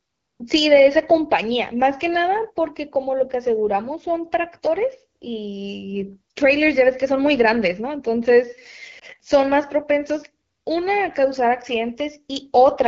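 AMR wideband (HD Voice) codec throughout: the speech sounds rough and raspy, which fits one of AMR-WB's lowest rates, around 8.85 kbit/s, where its pulse-driven vocal tract model runs short of detail.

Lost AMR speech frames at 8.99 to 9.04 s: one 20 ms frame failed, so the decoder briefly repeated the previous settings at lower gain, causing a short dip.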